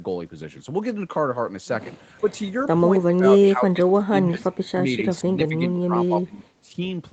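An echo canceller that could not tell the near talker from loudspeaker echo while both sides spoke is the likely cause of speech suppressed in double talk, turning the speech down with the echo. At 2.2 to 2.29 s the speech dips by about 10 dB. From 3.06 to 4.45 s it drops by up to about 25 dB, turned down for around a second in all. At 6.62 to 6.8 s it sinks by about 15 dB.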